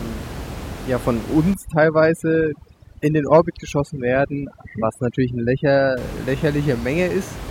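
From about 1.54 s to 5.97 s the speech goes through overdone noise removal. The denoiser is clamping down far too hard: any frequency band it judges close to the noise floor gets pulled way down or switched off, and the quieter parts of the voice are caught along with the noise. The room noise, which sits about 12 dB under the speech, drops and breaks up into little twinkling specks.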